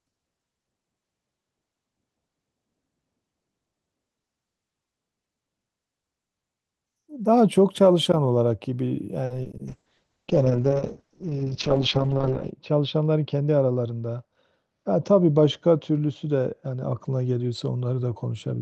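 From 9.25 to 9.61 s, repeated packet loss gives a choppy, robotic patch: five gaps, the longest 50 ms, covered by stretched copies of earlier sound. The waveform shows repeated blocks, and the spectrogram shows smeared bands.

A call bitrate drop follows from 9.69 s to the end, falling from 32 to 7 kbps. Coarser coding makes the sound rough and muffled, and the spectrogram cuts off sharply at 8 kHz.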